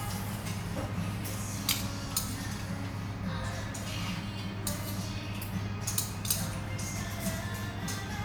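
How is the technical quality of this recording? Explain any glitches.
No technical faults are audible.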